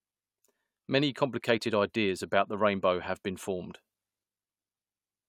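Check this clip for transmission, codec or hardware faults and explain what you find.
Nothing in the recording points to a transmission, codec or hardware problem. The speech comes through with no faults to report.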